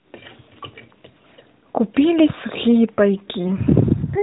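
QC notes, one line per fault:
3.48–3.54 s, lost AMR speech frame: a brief dip or warble in the speech, then a moment of weak or rough recovery. The decoder covered about 20 ms of missing audio, which fits one frame failing its checksum, by reusing the last good pitch and vocal-tract settings at reduced gain.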